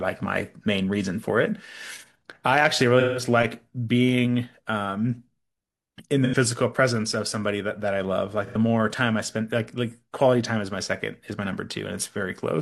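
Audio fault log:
2.99–3.23 s, 6.24–6.35 s and 8.46–8.56 s, AAC frame loss with concealment: frames went missing and the decoder rebuilt each gap from the last good spectrum, so the speech smears into a brief noisy, phasey patch lasting about 170 ms at 2.99 s (roughly four frames' worth) and about 85 ms at 6.24 and 8.46 s.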